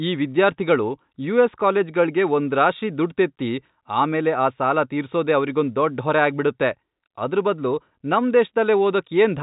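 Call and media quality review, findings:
No faults found: the speech sits inside the usual narrowband telephone channel, with nothing above about 3.8 kHz, as G.711 mu-law coding produces, and only faint coding noise under the signal.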